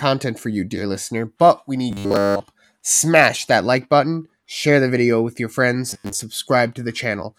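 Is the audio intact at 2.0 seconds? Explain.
No. Robotic sound from repeated short buffers runs from 1.91 to 2.40 s, right after "dear listener but we". Fresh audio likely arrived too slowly, so a chunk of about 10 ms loops throughout, imposing a rigid, metallic 100 Hz buzz that loosely follows the speech.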